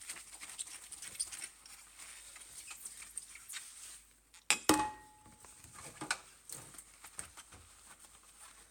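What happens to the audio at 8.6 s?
Nothing goes wrong at 8.6 s: the sound runs on intact through that moment, with no dropout, click or distortion.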